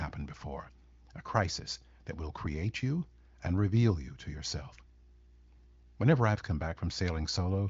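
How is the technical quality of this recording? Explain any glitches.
The speech shows no technical faults: its content stops at about 7.6 kHz, with little if any audible coding texture, which points to the AMR wideband (HD Voice) codec running at or near its highest rate of 23.05 kbit/s.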